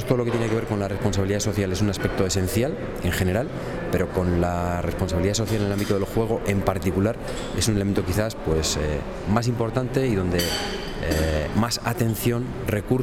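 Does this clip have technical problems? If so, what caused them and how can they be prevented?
No, nothing technical stands out here, so there's nothing that needs fixing or preventing.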